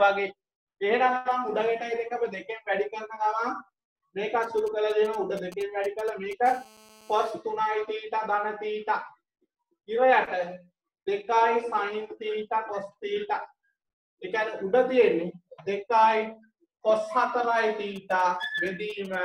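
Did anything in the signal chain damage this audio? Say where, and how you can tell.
Yes, and it's all in the analogue wiring. There are GSM signalling bursts from 4.43 to 6.33 s and again from 17.96 to 19.15 s: that galloping dit-dit-dit of short raspy buzzes pulsing at 217 Hz, roughly 20 dB under the programme in the first stretch and around 25 dB under in the second. A 2G handset nearby was doing its short handshake transmissions, and some unbalanced or poorly shielded input rectified the RF pulses into audio.

Right after the first patch, from 6.46 to 7.31 s, it turns into a continuous GSM phone buzz at about 26 dB below the signal. This one is a hard, harmonic-rich 217 Hz rasp that holds steady and has no relation to the programme. That's the handset in a call, transmitting 217 bursts a second without pause, and the same front-end rectification is turning every burst into an audible click train.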